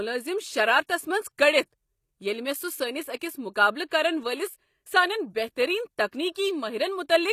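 Throughout the speech, the signal has likely passed through HE-AAC compression at a low rate, one that fits about 24 kbps. The upper band is synthesised from copied lower bands rather than coded, so s sounds turn gritty and lispy, and nothing remains above 14.9 kHz.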